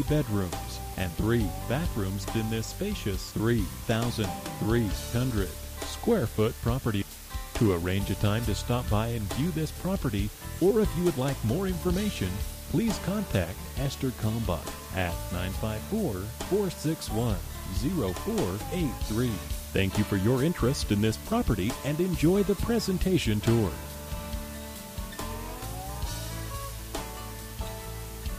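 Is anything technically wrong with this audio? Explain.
Yes. Throughout, a constant, even hiss sits only about 15 dB below the sound, without distortion: low bit depth with dither, consistent with 6-bit rounding spreading error into steady white noise.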